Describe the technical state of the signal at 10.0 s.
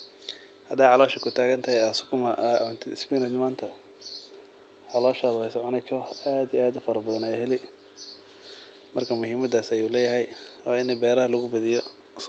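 At 10.0 s the speech is intact, with no dropout, click or distortion; it carries only the ordinary character of a WebRTC call path, band-limited at about 8 kHz as an Opus stream at around 32 kbps would be.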